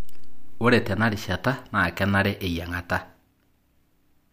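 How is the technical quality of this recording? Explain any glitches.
No technical glitches can be heard anywhere in this speech recording. There is nothing in the audio that needs explaining.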